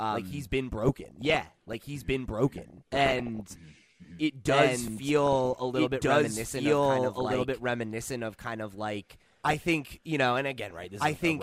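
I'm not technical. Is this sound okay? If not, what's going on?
No. Three things are wrong with this speech.

A doubled audio track runs through the whole clip. A second copy, about as loud, trails the original by roughly one and a half seconds. It is likely caused by the audio being recorded twice.

DAB burbling appears at 0.79 to 1.76, 2.58 to 3.40, 8.99 to 9.60 and 10.70 to 11.21 seconds. Weak digital radio reception lets errors through, creating short blips of noise.

A repeated buffer occurs at 4.88 seconds. The device ran out of fresh audio and replayed a tiny scrap, heard as a brief click.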